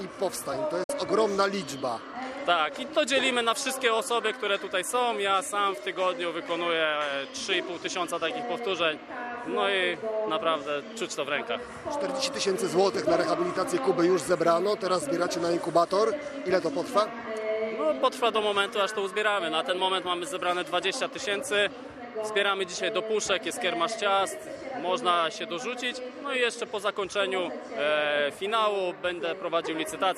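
At 0.83 s the sound drops out in a short digital broadcast dropout, falling silent in about 8 ms and returning at 0.90 s. The receiver stopped getting decodable frames and muted until valid ones resumed. About 48 ms of programme is missing, which fits two lost frames. Concealment in streaming codecs repeats or smears audio across a lost packet, but this gap is true silence with a quick fade into it, and the sound picks up later without any repeated material.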